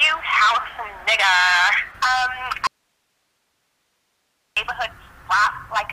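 At 2.67 s the sound cuts out abruptly and returns as suddenly at 4.57 s. This is an audio dropout to a faint residue, leaving only hiss about 50 dB down. The likely cause is a lost feed into a still-live path. Hard edges set it apart from a pause or fade.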